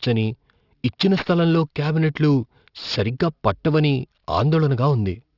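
Aliasing runs through the whole clip. The audio sounds like it was downsampled with no filter first, which fits a drop from 48 kHz to 12 kHz. Content above 6 kHz folds back down at wrong pitches, roughly 20 dB under the speech. Sibilants turn gritty and metallic.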